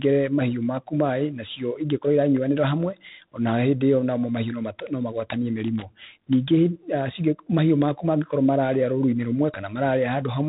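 From start to finish the speech carries G.726 ADPCM damage. Each sample is coded as a few bits of difference from an adaptive prediction, and the coarseness here fits the 24 kbit/s mode, with 3 bits a sample. Nothing passes above about 3.8 kHz, and a harsh, rasping hiss rides on the speech, rising and falling with its level. Unlike a perceptual codec's swirling or warbling, this grit is sample-level quantisation noise.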